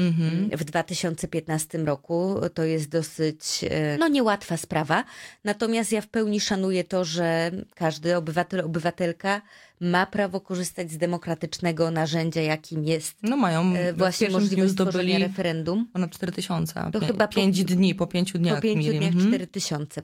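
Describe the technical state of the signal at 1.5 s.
At 1.5 s the signal is intact, with no dropout, distortion or other fault to be heard.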